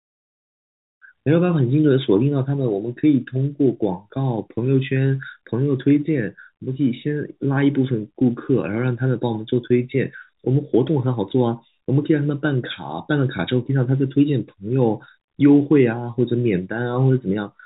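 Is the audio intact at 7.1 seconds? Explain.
Yes, the speech at 7.1 seconds is intact, carried as ordinary G.711 telephone coding with its narrow band below 4 kHz and no fault to be heard at that moment.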